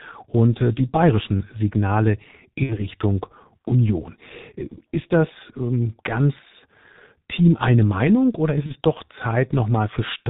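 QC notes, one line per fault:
throughout: G.723.1 codec. The speech is heavily muffled and hoarse, with nothing above 4 kHz and smeared consonants, which fits the 6.3 kbit/s mode. Its 30 ms frames and slowly updated voice model blur transitions, unlike plain low-pass filtering, which only removes the highs.
2.63–2.82 s and 8.66–8.74 s: VoIP packet loss concealed by the speech codec. The sound is stretched and fades, then stays weak briefly afterwards. The first fits two lost 30 ms frames, the second, just after "oder ist", one. Unlike a dropout, there is no silence.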